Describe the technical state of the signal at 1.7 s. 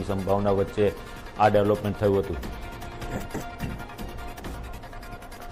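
At 1.7 s the sound carries MP3 compression damage, present throughout the clip, likely from a low-bitrate encode around 64 kbps. The treble is cut off and weak spectral lines flicker between frames, giving a watery, swirly texture, metallic chirps on bright content and smeared attacks.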